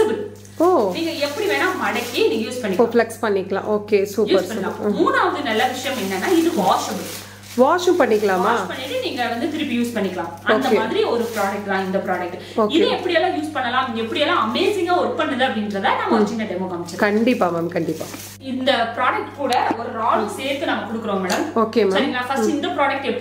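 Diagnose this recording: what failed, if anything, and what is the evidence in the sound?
Analogue wiring picked up mains hum. A steady 50 Hz tone runs throughout, roughly 25 dB below the signal. A ground loop or nearby transformer coupled the power line in.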